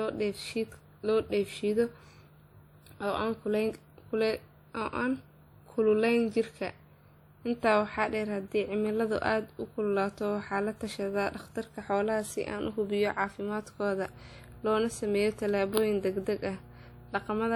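Throughout the speech there is a ringing, washy quality. A hiss rises and falls with the signal. This is plainly audible codec damage, likely from WMA compression at a rate around 48 kbps. Long transform blocks smear the quantisation noise over tens of milliseconds. Content still reaches about 20.1 kHz.

From 14.05 s to the end, mains hum appears. It is a steady 60 Hz tone, roughly 20 dB below the speech. Power-line current has coupled into the signal, through a ground loop or a nearby transformer.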